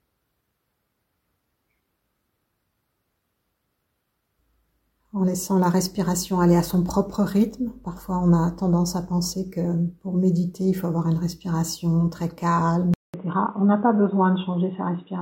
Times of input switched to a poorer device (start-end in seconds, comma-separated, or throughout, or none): 12.94-15.22